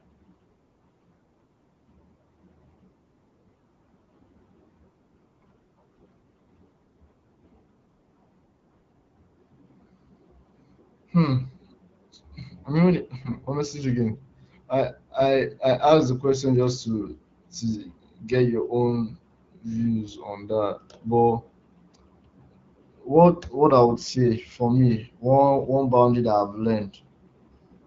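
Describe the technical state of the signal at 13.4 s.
AMR bit errors run from 13.22 to 13.38 s, ending just before 13.4 s. Across that span, which fits about eight 20 ms frames of the wideband speech coding, a sizable share of the less protected bits arrive flipped, on the order of several percent, while the frames still pass their integrity check and get decoded. The excitation pulses land in the wrong positions and the fine pitch, gain and spectral values drift, so the speech keeps roughly its pitch and level but turns hoarse, scratchy and gargly.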